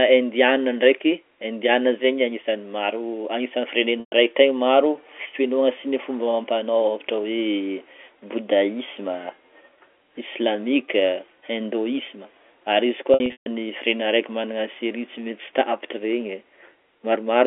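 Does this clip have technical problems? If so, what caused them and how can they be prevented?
Yes. Packet loss with pitch repetition occurs at 4.00–4.12 s and 13.14–13.46 s. At each dropout the receiver loops the last pitch period, producing a held, buzzy sound that fades toward silence. To prevent it, use a wired or less congested network with packet prioritisation and an adequate jitter buffer.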